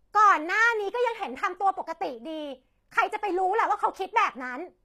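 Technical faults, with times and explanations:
Throughout: HE-AAC compression. The upper band sounds synthetic: s sounds come out gritty and metallic, and nothing survives above 14.9 kHz, which fits a low bitrate near 24 kbps. The likely cause is treble rebuilt by spectral band replication. Unlike simple band-limiting, the top still sounds bright, just wrong.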